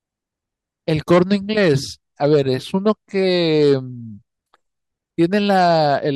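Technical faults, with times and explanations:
No technical faults can be heard in this speech.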